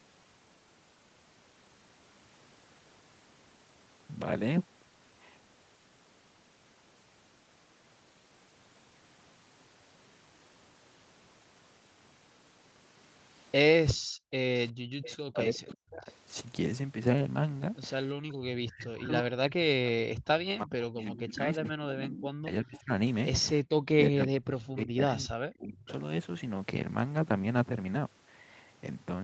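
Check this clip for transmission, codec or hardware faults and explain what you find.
The speech carries echo-canceller faults from about 13.9 s to 25.9 s: leaked echo, a gated background and speech dipping whenever both sides talk. The audio tops out near 8 kHz, as expected for this call path.

Echo leak: A delayed copy of the far side's voice trails in at 13.88–13.94 s, 15.05–16.15 s, 21.02–21.35 s and 25.88–25.93 s. It arrives 363 ms late and sits about 10 to 20 dB below the speech. It is likely residue that the far end's canceller let back through from its loudspeaker.

Background gated by the echo canceller: From 13.94 to 14.39 s the room tone drops by as much as about 40 dB, for roughly 0.4 s in total, then recovers. The canceller clamped the microphone hard while the loudspeaker played and released it afterwards.

Speech suppressed in double talk: The talker's voice dips deeply at 14.18–16.11 s, 18.24–22.91 s and 23.89–25.88 s, losing up to around 40 dB. 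This is likely the canceller failing to separate near speech from loudspeaker echo during overlap and attenuating both.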